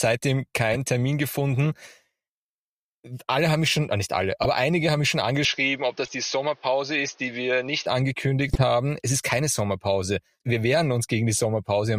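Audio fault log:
0.71–0.77 s, 4.43–4.46 s (right after "schon äh nicht alle"), 6.05–6.10 s, 8.49–8.62 s: corrupt frame decoded. Damaged compressed frames play back as brief bursts, peaking around -10 to -25 dBFS, misplaced in frequency. The longest burst covers several frames.
5.45–7.86 s, starting just after "einige haben mich schon": input switched to a poorer device, likely. The band stops at 6.5 kHz and a faint new hiss sits about 35 dB down. The change happens with no gap or level jump, and the sound later reverts, unlike a fixed filter.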